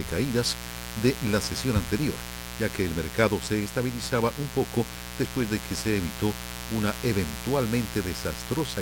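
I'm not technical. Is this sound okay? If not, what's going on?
No, there's a mains buzz running through the whole clip, a steady raspy hum sitting fairly loud under the sound. It comes from 60 Hz electrical power leaking in, likely through a dimmer, a rectifier or a cable missing its shielding, and its sharp spikes spread up into the higher frequencies.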